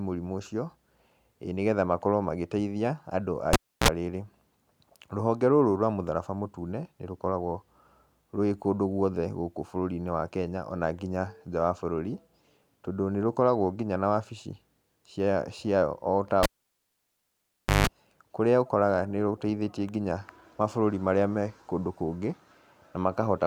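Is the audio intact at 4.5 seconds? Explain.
Yes, the speech at 4.5 seconds plays through cleanly, with no dropout, glitch or distortion at that moment.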